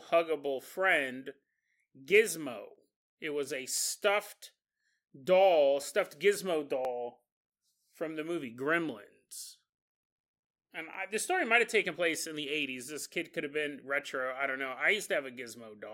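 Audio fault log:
0.71–15.02 s, periodic USB or driver dropouts: evenly spaced ticks run through the speech about once every 1.02 s, around fifteen in all, each audible only because signal is present to be cut. At each tick roughly half a millisecond of audio is simply skipped rather than filled with silence, so the waveform jumps abruptly and clicks. The strict regularity points to a background task stalling the USB bus or audio driver on a fixed cycle.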